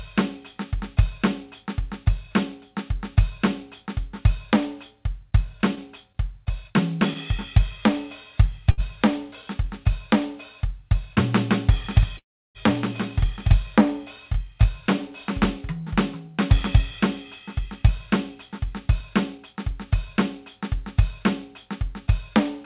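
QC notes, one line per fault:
5.75–7.18 s, scattered short gaps: about three tiny holes, the longest near 20 ms, each patched by continuing the last sound, leaving brief ticks rather than dropouts.
8.71 s, short stall from a late packet: one sound held 68 ms too long while the buffer ran dry, then the music resumes unbroken, unlike a loss.
11.85–15.58 s, doubled audio track: a second full-band copy about 5 dB down trails by roughly one second, likely from a slower capture path, dry and with abrupt edges.
12.17–12.58 s, call audio freeze: the last sound fades into about 330 ms of silence for 374 ms in all, then playback continues from where it stopped, not skipping ahead.
16.28–19.71 s, jitter buffer speed-up: tempo runs about 3% fast at unchanged pitch as short pitch-period slices are trimmed, roughly 150 ms in total.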